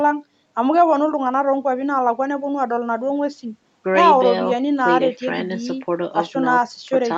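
There are no technical faults to describe in time order in this speech.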